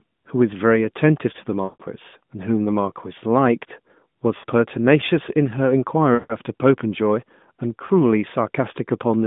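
Radio errors corrupted speech frames, producing lost AMR speech frames. The decoder repeated its last good pitch and vocal-tract settings at falling gain, so the sound smears and fades at 1.64–1.82 s and 6.14–6.36 s (about 160 ms each), and dips briefly at 4.38–4.45 s and 7.86–7.91 s.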